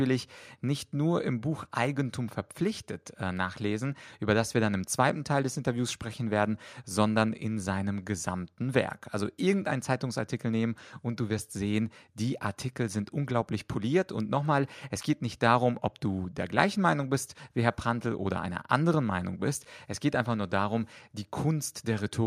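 Nothing stood out on listening to this recording.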